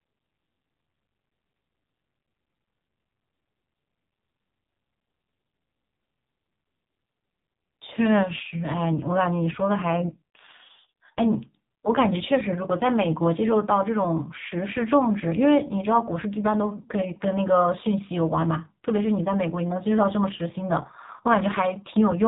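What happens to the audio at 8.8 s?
At 8.8 s the speech carries the same AMR narrowband mobile codec damage heard across the whole clip. The codec rebuilds the voice from a vocal-tract filter excited by a sparse set of pulses per subframe, and nothing survives above 3.8 kHz. The heavy buzzy, synthetic coloration fits one of the low AMR-NB modes, around 5.9 kbps, where too few pulses remain to reproduce natural excitation.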